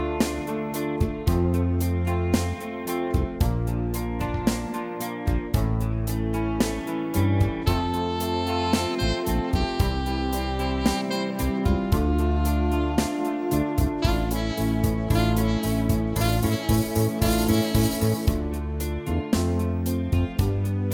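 No technical faults can be heard anywhere in the audio.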